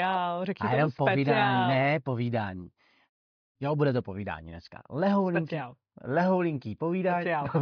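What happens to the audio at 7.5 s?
Nothing goes wrong at 7.5 s: the speech plays through that moment cleanly, with no dropout, click, distortion or other fault.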